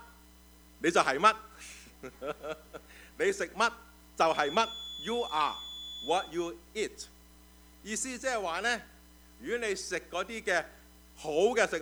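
From 4.22 to 6.34 s a thin, steady whistle near 3.4 kHz sits some 15 dB beneath the audio, swelling and fading slowly in level. This feedback whistle is likely a loudspeaker-to-microphone loop hovering at the edge of instability, sustaining one tone without escalating.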